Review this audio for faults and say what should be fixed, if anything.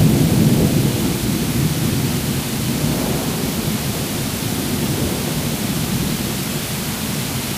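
Grainy, signal-following distortion runs through the whole clip, worst on the quiet tails, which sputter or drop out. That's low bit depth without dither, likely a 5-bit rounding, with the error sitting about 15 dB under the sound. Keep more bits, and dither whenever you reduce word length.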